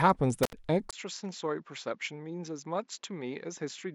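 At 0.43 s there's a classic intermittent contact: the line opens for about 73 ms, through to roughly 0.53 s, so the speech simply drops out with a little crackle on either edge where the connection breaks and makes again. While it's open you're left with just faint hiss. That's the signature of a loose plug or cable momentarily losing contact, not anything happening in the recording chain downstream.

Then at 0.91 s there's a brief gap of about 20 ms, and from there to the end the speech sounds noticeably different. It's duller and boxier, with nothing above 7.6 kHz, and it drops by around 10 dB. It also brings its own background noise, sitting well below the speech at around 45 dB down. That combination is most likely the input switched to a poorer device mid-recording, with the system jumping to a narrower-band microphone or headset path.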